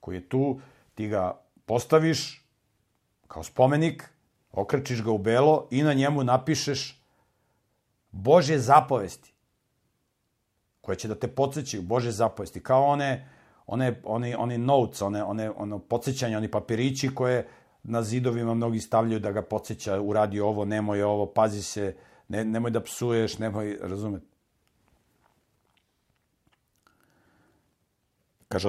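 A brief gap in the sample stream is the likely cause of two clicks in this speech, consistent with dropped samples: a fraction of a millisecond of audio goes missing, so the waveform leaps straight to a later value. Far too little is lost to remove any sound. Instead, at 17.15 s, just after "ono podsjećanje oni papirići", and again at 26.87 s, each jump produces a single sharp click, visible as a thin vertical line across the spectrum.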